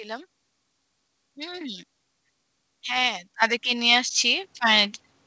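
At 3.42 s the microphone volume is stepped up by about 9 dB, and at 4.44 s it rises again by about 6 dB. The call software judged the input too quiet and raised the device gain in single jumps, so speech and background noise get louder together. On a waveform the envelope widens abruptly at each point. A spectrogram shows every band brightening at once, all below the 8 kHz ceiling that points to a G.722 call path.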